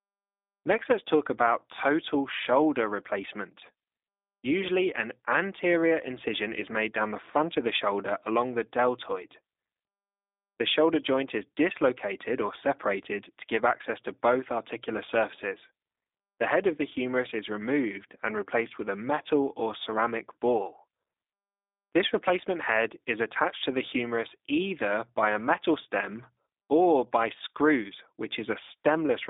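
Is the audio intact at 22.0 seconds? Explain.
No. At 22.0 s, as throughout, the speech has passed through the G.729 codec, which resynthesises it from a vocal-tract filter, pitch predictor and sparse pulses at a rate that fits 8 kbit/s. It sounds band-limited to roughly 250 Hz–3.7 kHz, with plainly audible rough, synthetic coloration.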